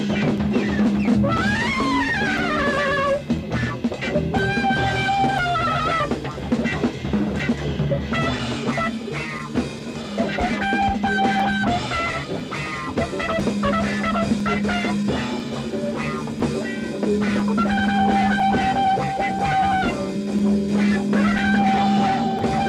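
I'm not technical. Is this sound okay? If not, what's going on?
No. There is a regular tick or small pop about once every second, from 0.38 s to 22.39 s, roughly twenty in all. This is called periodic USB or driver dropouts. Something in the background keeps interrupting the audio connection on a fixed schedule. Each time, a few milliseconds of sound go missing and are replaced by silence. That tiny gap is what you hear as a click, and it only shows up while sound is playing.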